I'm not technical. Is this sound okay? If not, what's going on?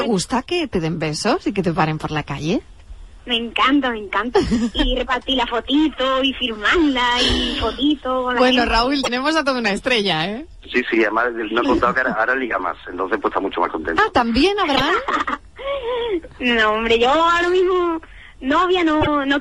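No. Throughout, a faint hiss or roughness rides on louder, brighter moments and disappears in quiet ones. That's sample clock jitter, a timing wobble of under a microsecond.

At 9.03, 14.75 and 19.01 seconds the sound jumps with a brief chirp or dropout, likely a broken MP3 bit reservoir, after missing chunks of data.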